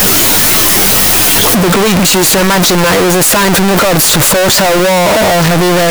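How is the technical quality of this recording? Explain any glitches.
Poor throughout. Float read as integer: 32-bit float samples were likely decoded as 32-bit integers, turning the speech into loud, harsh, near-square noise, with background as loud as the speech, though pitch stays audible.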